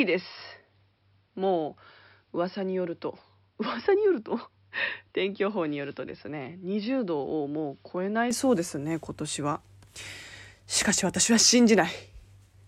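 From 0.0 to 8.31 s the speech sounds dull and boxy, a few decibels quieter, with faint added background noise, then opens up with no gap. That points to a likely input switched to a poorer device. A spectrogram shows nothing above 5.4 kHz until 8.31 s.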